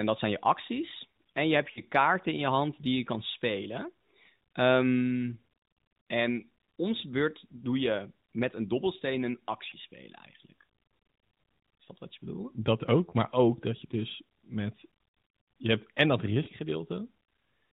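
Lost AMR speech frames at 1.72–1.80 s, 9.70–9.76 s, 13.10–13.13 s and 16.44–16.48 s interrupt this narrowband speech. The decoder fills each gap by reusing the last good pitch and vocal-tract settings at falling gain, producing brief dips or warbles. The first is longest, sounding like two frames.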